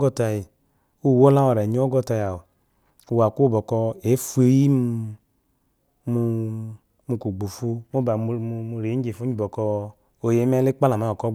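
No faults are audible anywhere in the recording.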